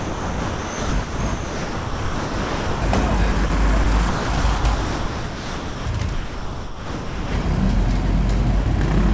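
The sender's voice detector most likely kept switching transmission on and off, causing sound chopped by the voice detector from 0.0 to 2.82 s, 3.32 to 3.50 s, 3.84 to 5.86 s and 6.14 to 7.44 s. About 2.6 s, 80 ms, 1.4 s and 1.2 s of the sound were swapped for comfort noise, so it comes out choppy.

At 8.64 s the detector likely mistook a quiet moment for background and stopped sending. This is sound dropped by the voice detector: about 20 ms gives way to steady comfort noise before the sound returns. Nothing above 8 kHz comes through the call codec.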